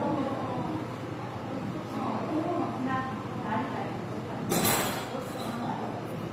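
Transcoding between lossy codecs runs throughout: nothing sounds above about 15.8 kHz, and two layers of coding artefacts are heard together, which fits a low-rate HE-AAC encode likely re-encoded by Opus at around 32 kbit/s, the second codec spending bits re-coding the first one's artefacts and adding its own.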